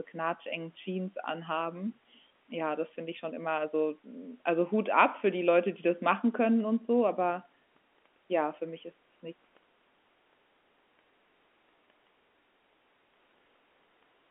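From 11.33 s to the end, a section at the wrong speed: the speech runs 1.54 times too fast, likely from playback against a mismatched clock. Pitch climbs about seven semitones as the pace hurries. Unlike a pure pitch shift, timing shrinks too.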